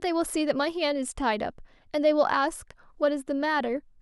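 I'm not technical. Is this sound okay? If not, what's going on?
Yes, nothing stood out as a problem when listening to this speech recording.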